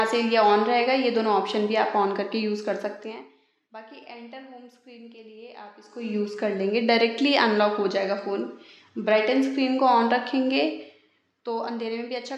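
Nothing stood out as a technical problem on listening to the audio.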